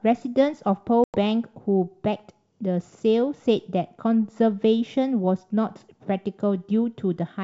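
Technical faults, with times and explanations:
1.04–1.17 s, packet loss on an ADPCM call: about 100 ms, roughly five packets, drops to silence, a hard-edged flat gap in the waveform and blank spectrogram column. The G.722 decoder's predictor and step size then mismatch the sender's, so speech resumes slightly distorted.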